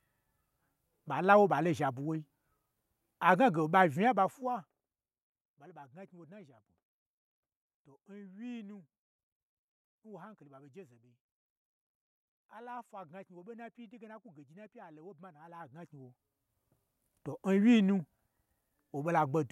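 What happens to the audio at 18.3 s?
Nothing goes wrong at 18.3 s; the speech plays through that moment intact, with no dropout, distortion or sudden jump in level.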